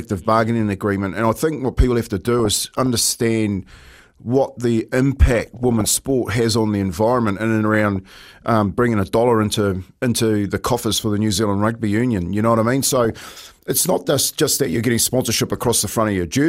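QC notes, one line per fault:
2.39–2.86 s, 5.16–5.85 s, 7.74–7.96 s, 9.43–9.58 s, 12.83–13.34 s, 15.57–15.85 s: DAB burbling in six short bursts, noise blips over the speech, the first right after "what people have to", the second between "what the" and "sport has on the", the last after "just that you're getting". Weak reception leaves residual bit errors, well under one percent, in the MP2 stream, so corrupted samples put short noise blips in single sub-bands and corrupted scale factors make sub-bands jump in level for up to a frame.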